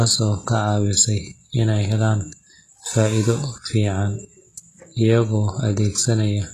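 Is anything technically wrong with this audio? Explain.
Yes. HE-AAC compression damage runs throughout the speech. The lower spectrum sounds coded on its own, and the treble is rebuilt from copies of those lower bands shaped by only a coarse envelope. Nothing remains above 12.4 kHz, and the damage is plainly audible. The s sounds come out gritty and metallic or lispy because the rebuilt harmonics don't align with the real ones. This likely comes from a very low bitrate, around 16 kbps.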